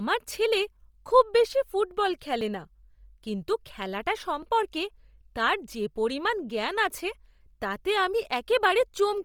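Throughout the speech there is a breathy, grainy edge with noise-filled highs, likely Bluetooth LC3 compression at a rate that fits 32 kbps in 10 ms frames, unlike the watery swirl of other codecs. At 2.41 s, after "ছেলে খুব বেশি ফুটবল", and at 4.43 s, after "কিন্তু খেলাটা", a tiny skip ahead points to a likely dropped buffer (overrun). A very brief piece is lost with no gap of silence, which distinguishes it from an underrun.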